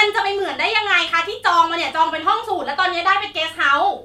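Nothing to flag here: listening through this short bit of speech, no technical faults turn up at any point.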